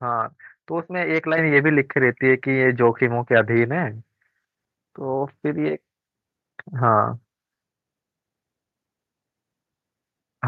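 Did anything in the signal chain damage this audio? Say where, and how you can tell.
Yes. A microphone volume step-up occurs at 1.38 s, introduced at the call-processing stage. The speech and the background noise floor jump in level together, by about 6 dB, in a single instant. Because the rise affects everything equally and persists afterward, it happened before any voice-specific processing. The call software judged the microphone too quiet and raised the device's input volume in one step instead of ramping it gradually.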